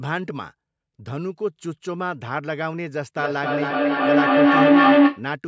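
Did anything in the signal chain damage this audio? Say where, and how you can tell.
Yes. Feedback howl appears from 3.17 s to 5.3 s. This is an acoustic loop between two call endpoints sharing a room, not damage inside any one device. A tone of roughly 300 Hz rises until it sits about 12 dB above the speech, with a loop delay of around 300 ms. Each pass from loudspeaker to microphone returns louder than it left, so the repeats build and narrow onto the frequency the loop favours rather than decaying.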